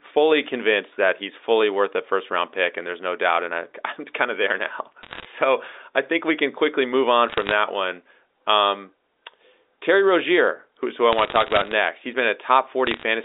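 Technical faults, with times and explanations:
5.02–5.25 s, 7.28–7.52 s, 11.13–11.74 s and 12.87–13.03 s: bit errors on a digital phone line. Short bursts of sharp ticks and crackle sit over the band-limited telephone speech, because flipped bits, up to around one in a hundred, each corrupt a single A-law sample.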